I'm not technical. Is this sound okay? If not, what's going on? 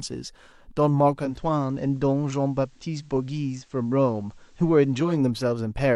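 No. From 1.13 s to about 5.25 s the speech turns a little quieter, with a faint hiss underneath. This is digital radio blending to analogue: the radio lost its digital signal and faded over about 0.3 seconds to the station's FM broadcast, then back.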